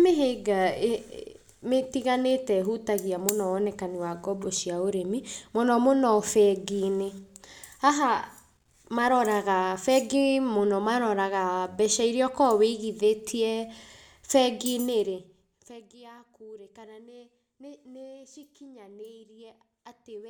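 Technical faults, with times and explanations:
No technical faults are audible in this speech recording. Its level changes smoothly, as a fader move should, with no unintended rise or fall in loudness.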